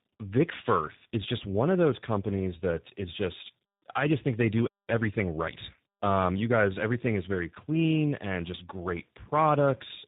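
From start to finish the speech carries tandem speech coding. It passed through G.726 at 24 kbit/s, G.711 A-law and then G.729A at 8 kbit/s, so two speech coders worked in a row on each other's damage. It sounds rough, muffled and warbly. A spectrogram shows a hard ceiling near 3.8 kHz and smeared, blotchy harmonics.

From 4.89 s to 6.35 s, after "just think they do" and before "you guys everything is", time-compressed catch-up hurries the sound to about 1.15 times normal speed at unchanged pitch. The player trimmed its backlog by cross-fading out small slices. The waveform shows syllables packed closer together, and the spectrogram shows harmonic spacing unchanged.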